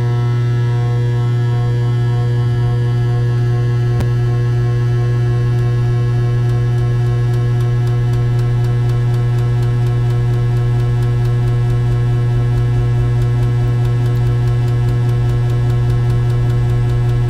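A recording of everyday sounds with one brief ordering fault at 4.00 s: chunks out of order. A short chunk of about 5.8 ms plays one chunk late, after the chunk that should follow it. Nothing goes missing. The order is simply swapped. This creates three hard joins where the waveform jumps instead of flowing. Together they give a tiny jumbled blip at that moment.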